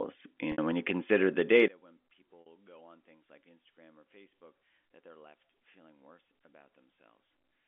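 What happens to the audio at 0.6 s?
Just before 0.6 s, from 0.52 to 0.58 s, there is packet loss with pitch repetition. About 60 ms of audio is missing. The receiver repeats the last pitch period, giving a brief buzzy hold that fades out. The speech then cross-fades back in on "when you consider the".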